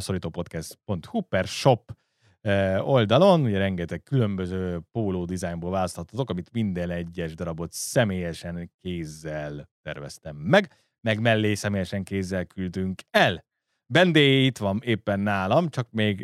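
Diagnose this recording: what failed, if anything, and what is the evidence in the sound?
Nothing stood out on listening to this speech recording, and no stage of the chain gave itself away with an audible failure.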